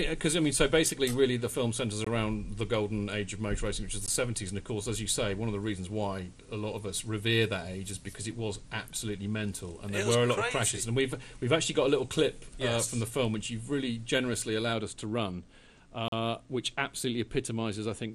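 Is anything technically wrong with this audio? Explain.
Yes. There are three gaps between stream segments, at 2.05 s, 4.06 s and 16.08 s. The first two last about 20 and 16 ms, and the third lasts about 40 ms. The segment boundaries fall every 2.0 s, and at these three boundaries the timestamps leave a small space between one segment's end and the next segment's start. The player fills that space with silence. Each gap is heard as a brief hard-edged dropout in the sound, like a tiny stutter. The audio continues intact on either side, with nothing missing.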